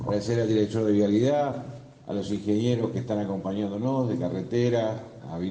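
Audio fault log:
1.51–1.53 s, compressed frames skipped: the decoder never played about three consecutive frames of the compressed stream, either because they were missing from the file or because it rejected them as damaged. Playback jumps forward by roughly 70 ms of sound, a jump that fits a frame length of about 23 ms, with a small piece of the sound simply gone.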